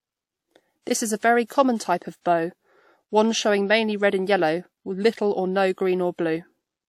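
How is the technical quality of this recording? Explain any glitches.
Two brief glitches occur in the speech. At 0.82 to 0.87 s, and again at 2.21 to 2.25 s just after "very common type of", a short hiss precedes a sharp onset, which sounds smeared. This is pre-echo: the codec spread its block's quantisation noise ahead of the attack, about 50 ms and 42 ms.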